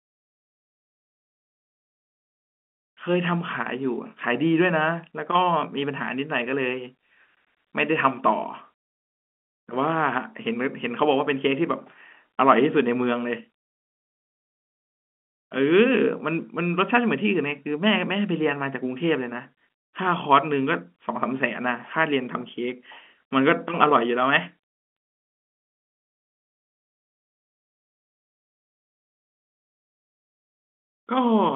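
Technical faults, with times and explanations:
No technical faults are present; the speech is carried by G.711 mu-law telephone coding at 64 kbps, with the band limited to the usual line range of about 200 Hz to 3.5 kHz.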